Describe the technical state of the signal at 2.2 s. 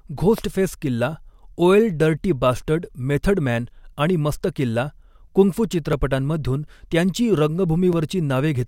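At 2.2 s the speech signal is intact, with no dropout, clipping, glitch or other fault to be heard.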